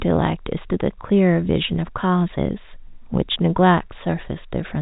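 No technical faults can be heard in the speech, which carries the narrow, band-limited sound of G.711 telephone coding, with nothing above 4 kHz.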